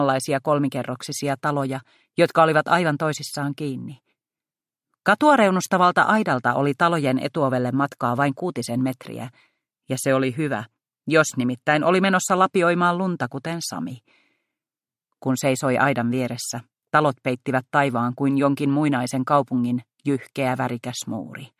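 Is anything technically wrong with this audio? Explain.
No, nothing technically wrong turns up in this audio. No working path is listed beyond the recording itself, so there is nothing further to describe.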